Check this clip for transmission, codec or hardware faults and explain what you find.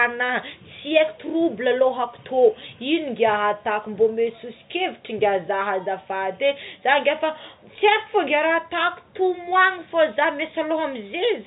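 Nothing here counts as a transmission, codec or hardware fault; the speech just has the narrow, top-capped sound of ordinary fixed-line telephone coding, which is working as it should.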